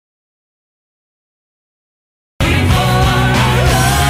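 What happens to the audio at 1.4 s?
At 1.4 s the audio is inside a dropout to silence, running from the start of the clip to 2.41 s: complete silence with no room tone, likely from lost input while zeros kept being written.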